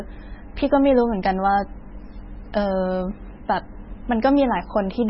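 From start to finish, the speech has nothing above about 5.6 kHz. S sounds are dull. Weak detail flickers in and out, giving a watery, swirly texture with metallic chirps on sibilants. Consonant attacks smear. The likely cause is heavy MP3 compression. Short of bits, the encoder cut the treble at a fixed point and dropped quiet frequency lines frame by frame. The damage fits a very low bitrate, around 16 kbps.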